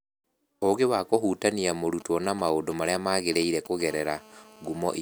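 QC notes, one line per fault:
2.00–3.82 s: GSM signalling bursts. A nearby 2G phone is handshaking with its network, sending short groups of radio bursts at about 217 Hz that the audio circuit rectifies into a galloping dit-dit-dit of brief buzzes, roughly 15 dB under the speech. A spectrogram shows clustered vertical stripes with harmonic ladders.
3.88–4.97 s: GSM phone buzz. The phone has moved into a call and now transmits in bursts 217 times a second. Rectified pulses give a steady, raspy buzz about 24 dB below the speech, unrelated to it. A spectrogram shows unbroken horizontal lines at 217 Hz and its many harmonics. The waveform carries a regular pulse train.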